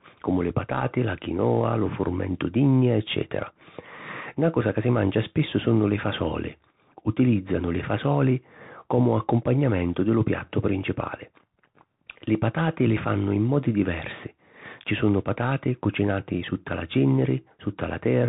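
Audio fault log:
Throughout, Bluetooth CVSD headset codec: the speech is confined to a narrowband channel with nothing passing above 3.8 kHz, which removes the upper sibilance and air and gives the dull, boxed-in headset sound. The codec damage is plainly audible. CVSD codes each sample as a single up-or-down bit, consistent with a 64 kbps stream, and adapts its step size as it goes. Fast, loud high-frequency content outruns that step, so s sounds turn scratchy and a granular hiss sits under the speech.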